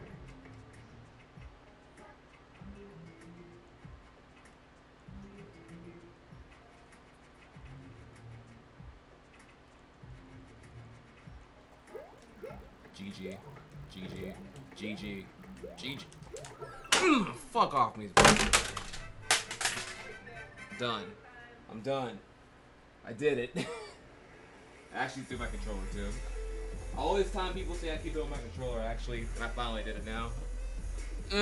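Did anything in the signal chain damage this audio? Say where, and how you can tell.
Yes. From 11.6 to 16.9 s the sound carries a steady 50 Hz buzz, a fast train of ticks that is present only while there is signal. It comes from the sample-rate conversion stage: a resampler restarted on every block, working on 20 ms blocks and apparently doubling the rate, which points to 24 kHz being converted to 48 kHz. Each block was filtered without its neighbours' samples, so every edge carries a small error, fifty times a second.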